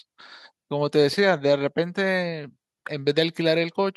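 No dropouts, glitches, level jumps or distortion events occur anywhere in this recording.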